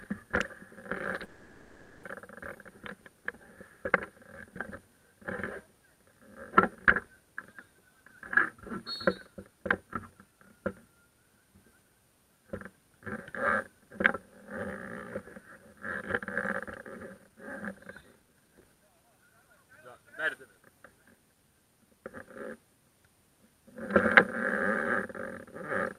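Call audio freeze at 1.25 to 2.05 s: the last sound stretches into a fading buzz for 0.78 s, likely from late packets draining the jitter buffer, then resumes with nothing lost. Jitter buffer speed-up at 9.27 to 10.93 s (109% speed, roughly 0.15 s cut), 17.19 to 17.37 s (161%, about 0.1 s) and 18.01 to 20.70 s (117%, about half a second): the buffer, overfilled, trims tiny pitch-period slices, so the sound hurries at unchanged pitch.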